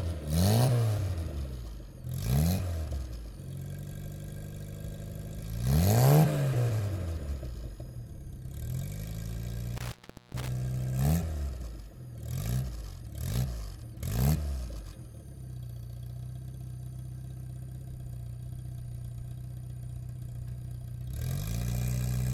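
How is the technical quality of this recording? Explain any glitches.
One glitch stands out. From 9.77 to 10.48 s, an intermittent contact opens the signal path for about 0.4 s, cutting the audio with crackle at both edges of the dropout.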